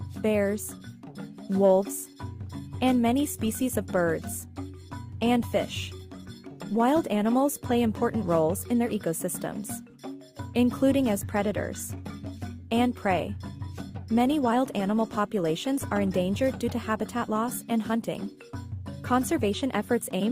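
No faults are audible anywhere in the recording.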